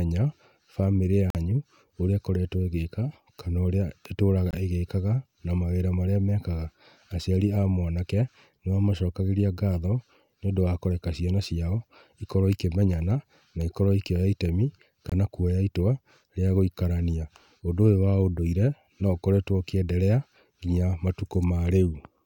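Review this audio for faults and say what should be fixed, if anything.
Bluetooth dropouts at 1.30 to 1.36 s, 4.51 to 4.54 s and 15.10 to 15.13 s: the speech cuts to silence for about 46, 23 and 23 ms, then resumes further along, likely because wireless packets arrived late and were discarded. The lengths fit whole packets of roughly 23 ms going missing. To prevent this, record through a wired path or keep the Bluetooth link short and free of interference.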